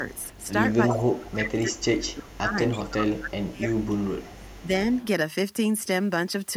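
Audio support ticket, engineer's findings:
Echo leak. Delayed copy of the speech, 327 ms behind, at 0.01–1.33 s only about 5 dB under the speech, then fainter at 2.30–2.34, 2.71–2.79 and 4.16–5.05 s. Likely far-end echo canceller passing loudspeaker pickup.

Speech suppressed in double talk, 0.86–4.71 s. Talker dips in pieces, around 25 dB at worst, roughly 3 s in total. Likely the canceller ducking its own talker along with the loudspeaker echo while they overlap.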